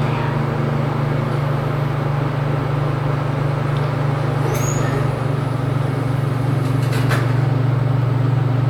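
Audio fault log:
No fault is found in the audio.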